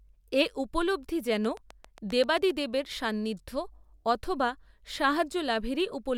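From 1.45 s to 2.51 s, a train of clicks runs over the speech. About ten sharp ticks arrive at a steady 7.6 per second. Each click has much the same shape. They stand out clearly, peaking roughly 5 dB above the speech, and they stay audible between syllables. The even spacing points to a repeating external pulse. The likely cause is interference from nearby equipment or a faulty connection or power supply.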